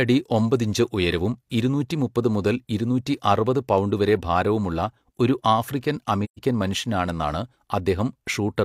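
From 6.24 to 6.40 s the speech fades out into silence and fades back in, a soft-edged hole of roughly 128 ms, which fits about three lost frames. This is AAC frame loss with muting: the decoder had no data for those frames and filled their spectrum with zeros. Because AAC builds its output from overlapping windows, the surrounding frames taper the level down and back up rather than cutting it off abruptly.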